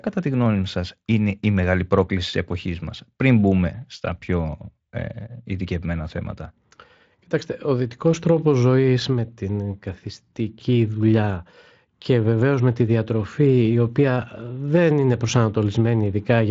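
Nothing here counts as a fault, since the speech simply carries the light coding character of a Speex link, with the top of the band stopping at around 7.6 kHz.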